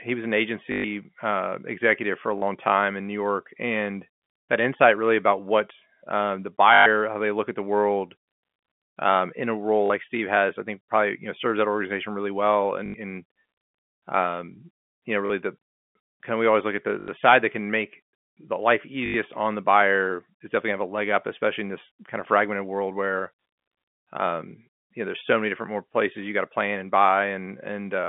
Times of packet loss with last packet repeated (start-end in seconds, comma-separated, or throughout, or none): 0.72-0.84, 2.38-2.42, 6.74-6.86, 9.86-9.90, 12.86-12.94, 15.26-15.30, 17.00-17.08, 19.06-19.14